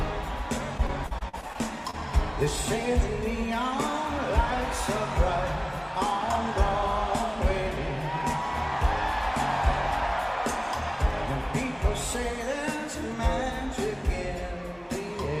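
From 0.77 to 1.95 s the audio breaks up with repeated packet loss, giving a choppy, robotic quality. Around nine short holes, the longest about 44 ms, are each patched by stretching the preceding sound, so roughly 17% of that span, about 200 ms in all, is synthetic fill. On a spectrogram the fills appear as frozen, smeared bands with hard vertical edges. The waveform shows repeated, near-identical cycles where the original detail should be.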